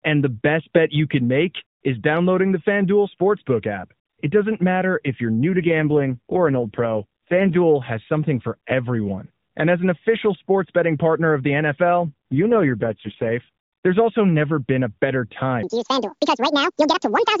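From 5.45 to 7.57 s, after "doesn't matter if you're" and up to "has something for everyone", the speech turns buzzy and synthetic, and again from 12.04 to 13.32 s after "betting partner of the". The band stays narrowband with no gap. These are AMR rate drops: the codec steps down, which fits a fall from 12.2 to 4.75 kbps, and spends fewer bits on the voice.

From 15.63 s, after "never been a better", to the end, the speech becomes high and hurried, about ten semitones up. This section plays at the wrong speed, 1.94 times too fast, likely because it was played against the wrong clock.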